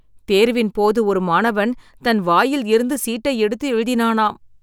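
No technical faults are audible.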